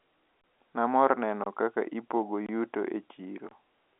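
A speech recording, heard through a telephone-band G.711 line, with a gap between chunks. Hard-edged holes of about 25 ms occur at 0.41, 1.44 (before "kaka ipogo yuto e"), 2.46 and 3.49 s, one per second, which points to 1-second chunks being played back with silence inserted at each join.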